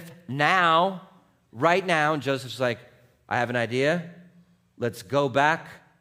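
No technical faults can be heard anywhere in the speech recording. Nothing in the audio points to a problem in how it was captured, processed or played back.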